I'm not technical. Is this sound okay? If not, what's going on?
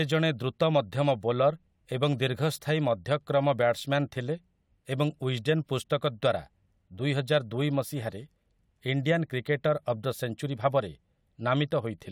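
Yes, nothing stood out as a problem when listening to this recording.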